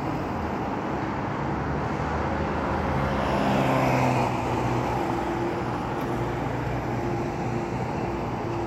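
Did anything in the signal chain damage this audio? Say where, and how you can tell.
No, nothing stood out on listening that would point to damage at any stage of the chain.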